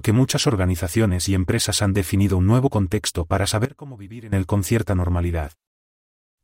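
A speech recording with a sudden gain jump from 3.65 s to 4.33 s. The level drops by about 18 dB at once, then snaps back. Speech and background noise fall together. The likely cause is a digital gain change applied with no ramp.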